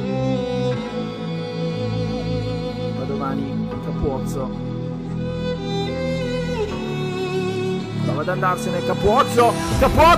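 No technical faults are audible.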